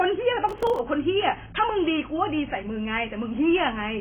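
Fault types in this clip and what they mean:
AAC compression: Likely heavy AAC-LC coding at a very low bitrate, in the region of 16 kbps, strips away high frequencies and coarsely quantises what remains. The speech is dull throughout, with nothing above 3.7 kHz, and sounds smeared with a warbling, fizzy texture.
processor overload crackle: The processor repeatedly fails to fill very short audio buffers, around a millisecond and a half each, and a dozen or more go out as silence. This leaves a gritty burst of crackle from 0.49 to 0.79 s.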